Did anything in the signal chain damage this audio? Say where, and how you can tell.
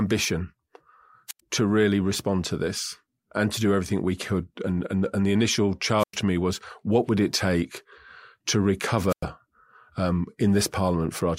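Yes. The damage comes before the analogue wiring, in the radio link of a wireless microphone, which suffers a squelch dropout three times. At 1.28 s, just before "to really respond to", at 5.98 s, after "and and the initial" and before "to me was what", and at 9.08 s, the RF signal fades. The receiver's squelch then mutes the output. Each event is a short swell of hiss followed by a hole of near silence of about 87, 102 and 99 ms, and then the speech comes back.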